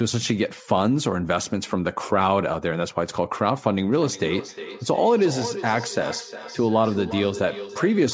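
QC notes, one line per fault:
3.91 to 8.13 s, feedback echo between two devices: a second device in the room plays the call aloud and its microphone sends it back, beyond either echo canceller's reach. The speech returns roughly every 0.4 s, thinner and ringing, peaking about 12 dB below the direct sound.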